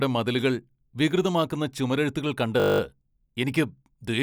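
From 2.6 to 2.8 s, after "മതിലുകൾ വികൃതമാക്കുന്ന ചുമരെഴുത്തുകൾ", a steady 50 Hz buzz: a system hang loop cycling one 20 ms buffer ten times.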